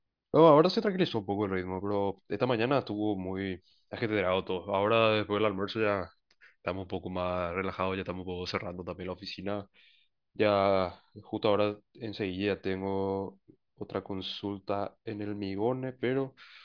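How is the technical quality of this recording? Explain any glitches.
Nothing in the recording stood out as a technical problem on listening.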